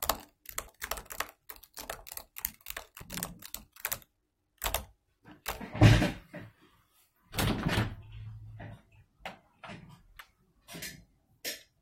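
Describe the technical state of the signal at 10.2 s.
At 10.2 s the audio jumps forward, with roughly 300 ms of material simply missing. These are compressed frames skipped: a run of around fifteen frames, each about 21.3 ms long, never reaches the output because the frames were absent or rejected as damaged by the decoder.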